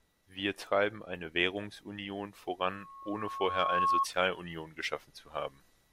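The microphone picks up its own loudspeaker, and from 2.69 to 4.06 s a 1.1 kHz feedback squeal swells over about a second, ending louder than the speech.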